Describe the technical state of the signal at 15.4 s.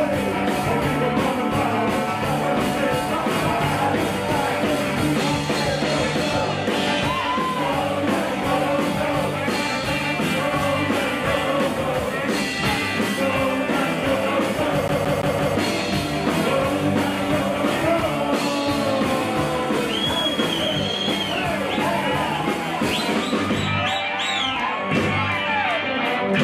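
At 15.4 s you're inside a CD stuck on one turn, running from about 14.88 to 15.55 s. A scratch keeps kicking the laser back a track at the same point on the disc, so one chunk of roughly 0.17 s plays four times over, with a brief mute at every jump back. It gives that quick, evenly spaced stutter you'd recognise from any skipping CD, and it clears at the end of that span.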